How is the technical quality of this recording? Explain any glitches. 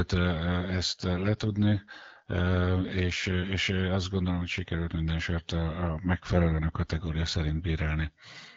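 The speech has two stretches of AMR rate drop on an AMR-WB (HD Voice) call. Outside those stretches there is only light coding roughness. From 0.46 to 3.52 s, ending just before "azt gondolom hogy sikerült", and again from 5.99 to 7.92 s, the voice turns rougher and more synthetic. The bandwidth stays the same and there are no gaps. This fits a weak radio link pushing the codec down from what sounds like 12.65 kbit/s to 8.85 kbit/s. At the lower rate, fewer bits go to the speech and more go to error protection until the rate recovers.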